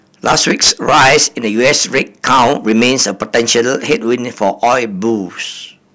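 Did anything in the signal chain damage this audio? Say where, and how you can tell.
Yes, hard clipping throughout the speech, driven about 18 dB past full scale at the converter or gain stage. Around one sample in twenty is sliced flat, giving harsh fuzz on every loud syllable. The distortion follows level and has abrupt edges, unlike rounded saturation or codec smearing.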